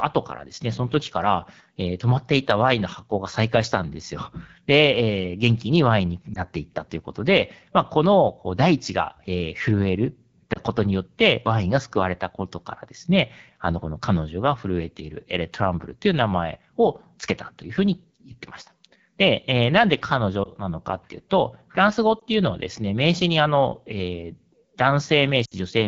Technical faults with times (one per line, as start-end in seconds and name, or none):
0.00-25.87 AMR wideband (HD Voice) codec
6.34-6.39 lost AMR speech frames
10.53-10.59 lost AMR speech frames
20.44-20.49 lost AMR speech frames
22.19-22.24 lost AMR speech frames
25.45-25.54 lost AMR speech frames